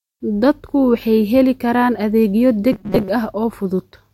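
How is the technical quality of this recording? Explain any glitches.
One glitch stands out. From 2.72 to 3.09 s, just after "heli karaan adeegyo", the speech turns into a rigid, metallic buzz at 188 Hz that only loosely tracks the words. This is robotic sound from repeated short buffers, likely from audio arriving too seldom, so roughly half the time is filled by replaying segments of about 5.3 ms.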